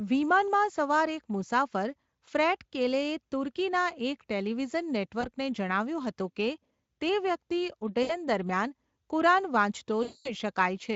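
Packets went missing three times in this Speex-coded speech, and the decoder filled each gap with VoIP packet loss concealment, extrapolating from the last pitch and filter at falling gain. At 5.21 s a 20 ms gap leaves a brief smear. From 8.03 to 8.14 s a 60 ms loss turns into a short buzzy stretch. From 10.03 to 10.35 s a 220 ms loss becomes a fading, coloured tone, with weakened speech lingering after packets resume.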